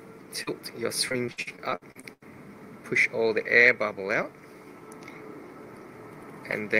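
The audio carries two packet-loss faults. First, a short concealed packet loss at 0.43 to 0.49 s: about 40 ms of the stream didn't arrive in time, and the decoder covered 33 ms of that by extending the last sound, carrying its pitch forward if it was voiced or generating shaped noise if it wasn't, before blending back into the real signal. You hear a quick smear there, and anything very short in that window can get swallowed. Then from 1.09 to 2.23 s there's repeated packet loss giving a choppy, robotic sound: twelve separate gaps, 420 ms missing in total with 405 ms patched, the longest single gap 80 ms. Each hole gets bridged by continuing whatever came just before, and the next one lands soon after, so about 35% of that stretch is concealment rather than real audio, which breaks it up with pieces missing.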